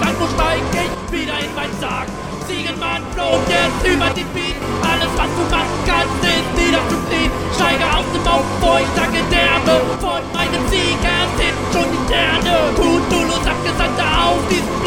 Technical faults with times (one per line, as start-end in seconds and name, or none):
0.94-3.33 one channel drops out
4.12-4.62 one channel drops out
9.96-10.39 one channel drops out